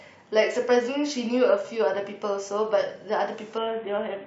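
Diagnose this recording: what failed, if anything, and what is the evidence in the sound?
Codec stage, a Bluetooth SBC bit pool drop: from 3.58 s to the end the treble dulls and gritty noise rises, which fits the bit pool falling from 28 to 5.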